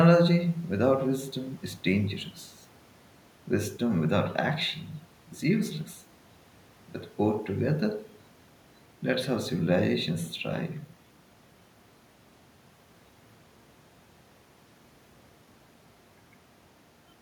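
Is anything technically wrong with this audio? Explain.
No, no technical faults are audible.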